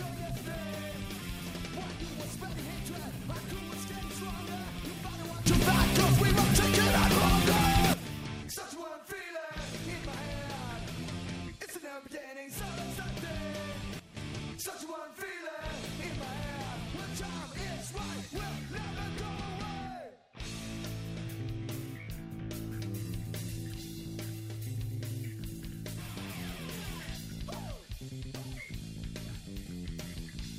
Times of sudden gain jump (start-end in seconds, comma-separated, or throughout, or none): 5.46-7.94, 13.99-14.17